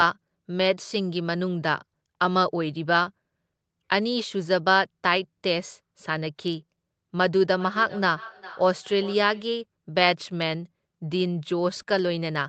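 Speech, with a feedback echo between two devices from 7.54 to 9.55 s. Each word comes back roughly every 0.4 s at about 19 dB below the speech, thinner and ringing, as a second device in the room replays the audio into a microphone whose echo canceller cannot remove it. On a spectrogram, faint, evenly spaced copies trail each syllable beneath the call path's 8 kHz ceiling, and the waveform shows small repeating bursts.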